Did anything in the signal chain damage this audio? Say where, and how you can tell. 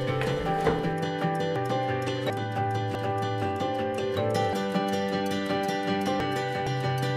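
Yes. The codec decode dropped compressed frames, so the audio jumps forward at 1.56, 2.30, 2.95, 4.53, 6.20 and 6.67 s, losing roughly 0.3 to 0.7 s each time.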